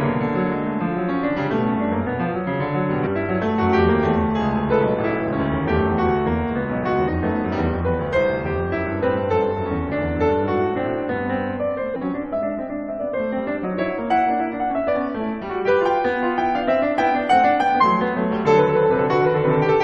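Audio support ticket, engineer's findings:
Damaged data in a compressed stream, music track. Short chirp/blip bursts, about 20 ms each, at 3.05–3.07 s, 7.07–7.09 s, 11.95 s, 14.87–14.89 s, 17.80 s. Probable component: decoder input, meaning the file or transport. Corrupt bytes in the affected frames cause misdecoding or frame rejection. The decoder loses sync and resyncs at the next valid header, producing a brief burst of garbage at each point.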